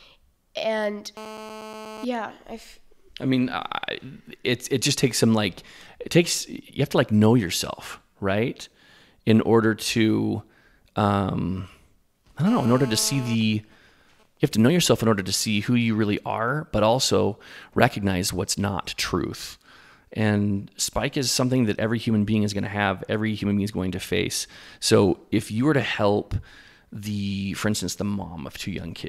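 From 1.17 to 2.05 s, GSM phone buzz intrudes: a nearby 2G phone's 217 Hz radio bursts are rectified, giving a hard, raspy buzz about 15 dB below the speech. It returns from 12.47 to 13.35 s, about 14 dB down. From 13.41 to 14.50 s, just before "to know yourself in", GSM signalling bursts follow. These are faint, even ticks with a longer 217 Hz buzz twice a second, well below the speech, from the phone's sparse transmissions while its user is silent.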